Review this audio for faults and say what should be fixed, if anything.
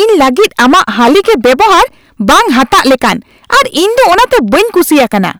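Hard clipping runs throughout this speech: driven about 17 dB past full scale, roughly a fifth of samples are flattened, giving harsh fuzz on every loud syllable rather than soft compression. Set gain with headroom before the converter.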